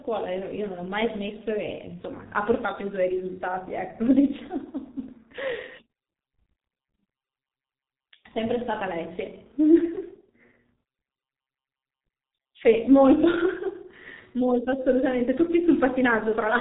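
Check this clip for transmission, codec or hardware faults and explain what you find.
One fault runs through the whole recording: heavy G.723.1 codec damage. The sound points to about 6.3 kbit/s framed coding that discards everything above 3.8 kHz, leaving muffled, hoarse speech. A spectrogram shows an empty band above 3.8 kHz and smeared formants.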